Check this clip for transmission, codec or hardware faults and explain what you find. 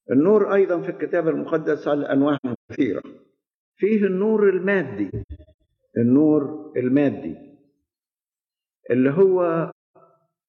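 Three transmission faults, all AAC frame loss with muting, at 2.36–3.06 s, 5.09–5.74 s and 9.70–9.97 s. Frames were lost and the decoder zeroed their spectrum, so overlapping windows fade the sound out and back in, leaving soft-edged holes. The first two are patchy, totalling about 340 and 380 ms with longest gaps near 150 and 100 ms. The last loses 256 ms.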